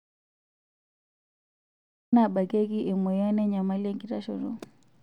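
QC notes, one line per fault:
0.00–2.13 s, audio dropout to silence: the speech clip opens in silence, with no room tone at all, and the speech cuts in abruptly at 2.13 s. The input was likely lost and silence written meanwhile, so anything spoken then is gone.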